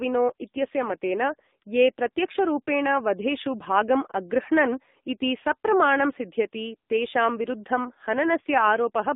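AMR narrowband mobile codec damage runs through this speech clip from start to finish. Everything sits inside roughly 200 Hz to 3.7 kHz, and the pulse-driven vocal-tract model leaves the speech plainly buzzy and synthetic, which fits a low mode around 7.4 kbps.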